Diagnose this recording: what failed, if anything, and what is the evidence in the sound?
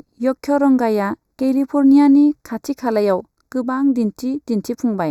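Channel delay (comb filtering) at the buffer stage: a fraction-of-a-millisecond lag before mono summing hollows the speech throughout, leaving fixed spectrogram notches from around 3 kHz.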